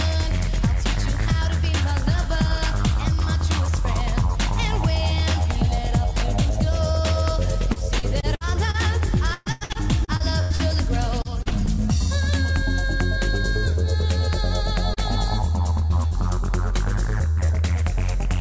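From 7.73 to 8.77 s, 9.34 to 10.62 s and 11.22 to 11.70 s, repeated packet loss (robotic sound) occurs as packets drop again and again. Each hole is bridged by extending the last sound before the next one opens. The middle stretch is worst, with eight gaps up to 120 ms long and about a third of it synthetic. The result is choppy audio with pieces gone.

Short concealed packet loss occurs at 14.94 to 15.00 s, 15.87 to 15.93 s and 16.08 to 16.14 s. Each time, about 30 ms fails to arrive and is patched from the preceding sound, leaving a brief smear or wobble.

A burst of packet loss at 17.31 to 17.40 s drops about 60 ms. The fill is a fading held buzz or hiss. Another short concealed packet loss follows at 17.46 to 17.52 s. The band stops at 8 kHz, which fits a wideband call codec such as G.722.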